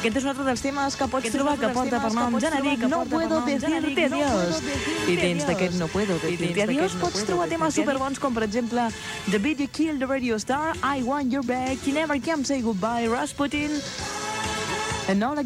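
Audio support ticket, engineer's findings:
Doubled audio track, 1.20 s to 7.96 s. Second full-band copy trails the original by about one second, roughly 5 dB quieter. No decay, no room colour. Copy starts and stops abruptly at both ends. Likely cause: second capture path or edit holding two out-of-step copies. Check routing for duplicate feed.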